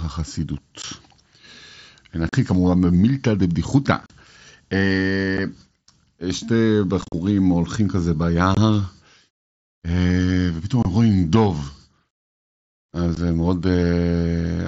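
Speech over a wideband mSBC Bluetooth headset link, and it suffers unconcealed Bluetooth headset packet loss: the sound drops to silence with hard edges at 0.82, 2.29–2.33, 4.02–4.10, 5.37, 7.02–7.14, 8.55–8.57, 10.83–10.85 and 13.15 s. Gaps come in steps of about 7.5 ms, which fits single mSBC packets vanishing between headset and phone with nothing filling in. At 4.02 and 7.02 s the holes are scattered, so it sounds choppy and crackly rather than one clean dropout.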